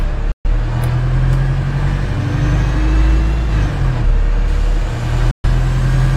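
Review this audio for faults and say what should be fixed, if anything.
A digital broadcast dropout mutes the sound from 0.32 to 0.47 s and again from 5.31 to 5.48 s. Each time the receiver rejected bad frames, fading out over about 3 ms. About 128 ms of audio is lost each time, which fits three dropped frames. A waveform shows a flat gap and a spectrogram a blank vertical band. Stronger reception or error concealment would prevent it.

Pre-emphasis was left on from 4.48 s to the end. The treble boost was never undone, leaving 10 kHz about 8 dB hotter than 1 kHz, which fits the 50/15 µs CD curve. The sound turns thin and sibilant. A spectrogram shows brighter upper bands than before 4.48 s. Applying the matching de-emphasis on playback would fix it.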